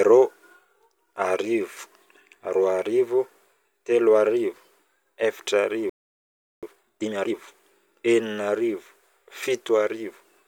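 At 5.89 s the speech cuts out mid-flow and stays silent until 6.63 s, a playback stall of about 0.73 s. The likely cause is a player starved of data or a blocked output thread.

From 6.63 s to 7.35 s comes time-compressed catch-up. The player clears its backlog by removing small slices and cross-fading the joins, so the speech runs at twice normal speed. It is hurried but keeps its natural pitch, unlike a sped-up tape.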